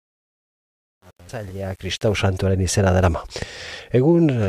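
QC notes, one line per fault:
0.00–2.21 s, truncation distortion on a fade: The fade-in rises to full level by 2.21 s, but its quiet start is coarse. From 0.00 to about 1.98 s the sound is gritty. The gain stage keeps too few bits and adds no dither. The low-level waveform collapses into a few square steps, which fits an 8-bit stage. The grit fades as the level climbs clear of the smallest steps.
1.28 s and 3.25–3.27 s, damaged data in a compressed stream: Two brief blips cut through the sound. The first is at 1.28 s, inside the fade. The second lasts about 20 ms. Bytes in the compressed stream are wrong at these points. The decoder misreads those frames and loses sync. It then hunts for the next valid frame header. That produces a short glitch instead of clean audio.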